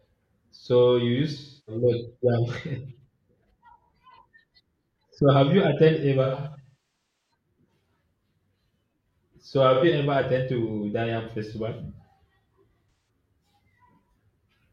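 AAC frame loss with concealment occurs at 1.37–1.83 s, 6.24–7.31 s, 9.74–9.85 s and 12.90–13.09 s. The decoder patches missing frames from the last good spectrum, giving smeared, phasey speech. The 6.24 s stretch is scattered dropouts, the longest around 200 ms.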